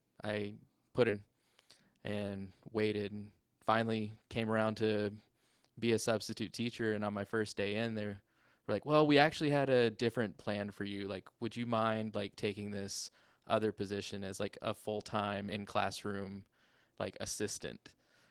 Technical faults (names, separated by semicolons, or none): skip ahead; jitter buffer speed-up